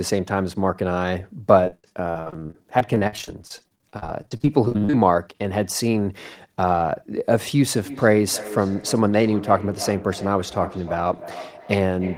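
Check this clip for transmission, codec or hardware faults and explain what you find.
Two faults are audible: a choppy patch early on, and an echo that runs to the end.

Repeated packet loss (robotic sound) runs from 1.65 to 4.94 s. Dozens of short holes appear, the longest 52 ms. Each is patched by stretching the previous sound, so about a third of this span is filler. The speech turns choppy, with pieces missing.

Feedback echo between two devices starts at 7.84 s and lasts to the end. A second device in the room replays the call, and this microphone catches it again. Each word returns roughly every third of a second, thin and ringing, at its loudest about 15 dB below the speech.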